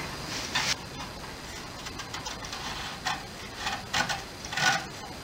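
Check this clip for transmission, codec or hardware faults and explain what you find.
One fault runs throughout: imaging from linear upsampling. The 22 kHz audio was raised to 48 kHz with straight-line interpolation. Faint mirrored images, roughly 25 dB down, sit between 11 kHz and 22 kHz, adding metallic shimmer.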